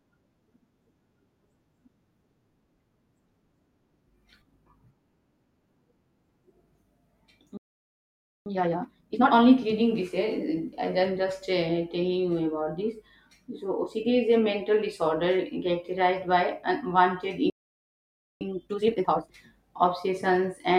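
At 7.57 s the speech cuts out for about 0.89 s, and again at 17.50 s for about 0.91 s. This is a playback stall, likely the player running short of data. It is longer than a brief dropout. Each stall ends in time-compressed catch-up, from 8.46 to 9.34 s and from 18.41 to 19.31 s. The speech runs at double speed while the pitch stays normal, which sets it apart from a sped-up, higher-pitched playback.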